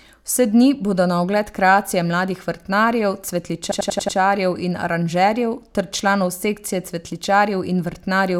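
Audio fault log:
3.72–4.18 s: system hang loop. A 93 ms segment repeats five times at 10.8 Hz, a machine-gun stutter consistent with a frozen 4096-sample ring buffer.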